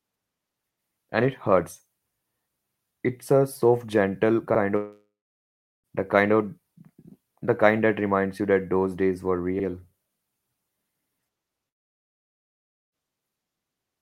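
Speech drops out at 4.76–5.87 s, a fading buzz then silence, resuming at "the kind of", and at 11.69–12.95 s as plain silence; likely long network dropouts losing about 1.1 and 1.2 s.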